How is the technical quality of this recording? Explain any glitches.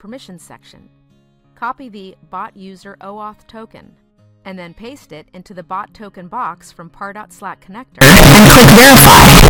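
The recording runs cleanly until about 8.01 s, and then it falls apart for the rest of the clip. From 8.01 s to 9.50 s there's a blast of very loud, harsh distortion, with quiet moments hitting just as hard as everything else. That's most likely signed and unsigned mixed up: the samples, which look like 16-bit, are being read with the top bit flipped, so every zero crossing jumps across the full range.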